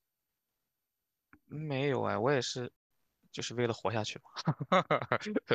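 At 2.76 s the speech cuts to silence. This is a digital broadcast dropout. The receiver lost valid frames and muted its output. The hole lasts 144 ms, which fits about six lost frames. Sound returns at 2.91 s, with that stretch missing.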